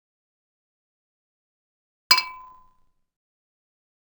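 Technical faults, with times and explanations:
Throughout: interleaved audio read as planar. Each 10.88 ms block of alternating left and right samples is split into halves, one per channel, so both play at half speed. With such short blocks the sound turns dull and robotic, buzzing at about 92 Hz, without a clear octave drop.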